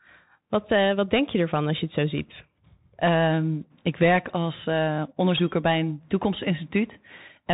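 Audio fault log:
throughout Bluetooth CVSD headset codec: the speech has been squeezed through the narrowband headset link, and the damage is plainly audible. Everything stops at 3.8 kHz, so on a spectrogram the energy ends at a flat ceiling with empty space above it. The one-bit delta modulation, which fits a 64 kbps stream, can only step up or down, so steep waveform slopes get smoothed into ramps, sibilants turn scratchy, and a grainy noise floor fills the gaps between syllables.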